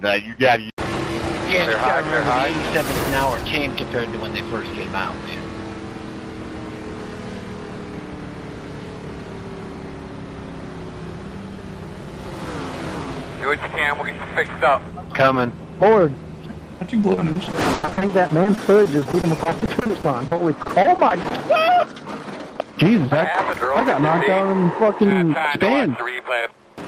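From 17.01 to 21.33 s there is repeated packet loss, giving a robotic sound. Data arrived late or not at all over and over across that stretch, in dozens of short gaps, the longest about 100 ms. About 920 ms was patched by extending the preceding audio, roughly a fifth of the span, while another 800 ms simply dropped out. The sound turns choppy and robotic, with smeared, repeated fragments alternating with missing pieces.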